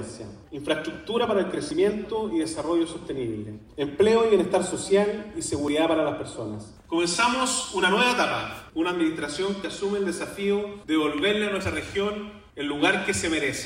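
Overlap between stream segments causes brief skips at 1.71, 3.67 to 3.70, 5.68, 9.64 and 11.60 s, at boundaries of the 2 s segments. Overlapping segment timestamps made the player discard 8 to 27 milliseconds of sound, so the waveform jumps.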